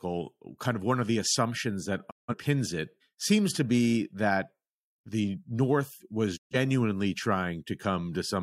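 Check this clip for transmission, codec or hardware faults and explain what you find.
Two digital broadcast dropouts in this speech. At 2.09–2.34 s, right after "of the assumptions that", the receiver stops getting good frames and mutes with a quick 20 ms fade. About 170 ms goes missing, which fits four lost frames, before "it seems to be". A second, shorter hole at 6.36–6.56 s drops roughly 130 ms, about three frames. What was sent during both gaps is simply gone.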